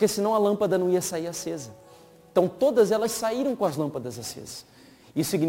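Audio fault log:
Throughout, sample clock jitter: the converter's clock wanders by roughly 7 microseconds, so each sample lands slightly off its proper instant. The resulting error scales with how steeply the waveform is changing, leaving a grainy hiss about 25 dB below the sound that swells on loud, bright passages and disappears in silence. On a spectrogram this appears as a diffuse noise floor that rises with signal level and high-frequency energy; the waveform looks slightly fuzzy on fast edges.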